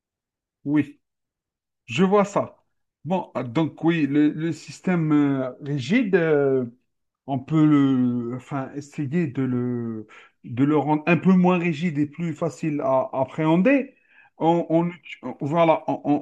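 No technical faults can be heard in this speech recording.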